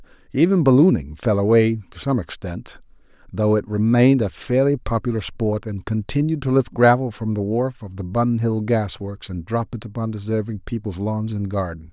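Nothing in the speech stood out as a technical fault on listening.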